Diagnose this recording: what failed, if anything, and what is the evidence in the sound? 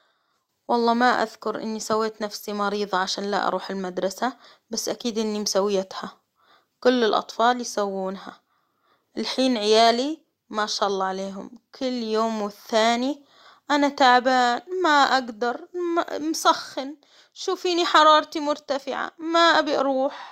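Nothing in the recording points to a failure at any stage of the chain. The speech holds steady throughout, with no audible event that calls for explanation.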